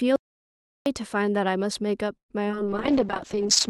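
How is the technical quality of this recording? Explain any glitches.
The recording has several clear glitches: a long cut to silence near the start, a brief stall, two tiny smears, and a marked loss of clarity through to the end.

From 0.16 to 0.86 s the speech vanishes into dead, complete silence, with not even room tone, for about 0.7 s. This is an audio dropout to silence. The input was likely lost, perhaps through a disconnected device or a failed link, while recording continued writing silence. Whatever was spoken in that stretch is gone for good.

At 2.17 s the sound hangs briefly, with the last moment drawn out and fading into near-silence for about 90 ms before resuming at 2.31 s. That is a call audio freeze. Packets were likely held up in transit, emptying the receiver's jitter buffer, so it stretched the final sound until delivery resumed. Nothing is lost; instead roughly 112 ms of extra delay is inserted.

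At 2.49 s and again at 2.52 s there are two quick smears or wobbles, back to back. These are short concealed packet loss. Each time about 20 ms of audio failed to reach the decoder, and the receiver papered over the hole by extending the preceding sound before blending back into real speech. The result is a fleeting blur rather than a clean gap.

From 2.66 s to the end, the speech turns rough, watery and duller, lacking crispness in its upper range. This is a call bitrate drop. The connection's bandwidth estimate fell and the encoder was forced to code far more coarsely. That fits a fall from around 32 kbps to around 7 kbps, a rate at which high frequencies are trimmed away. It never recovers before the clip ends.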